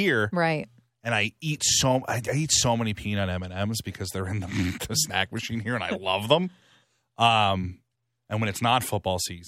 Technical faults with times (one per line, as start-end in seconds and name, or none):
none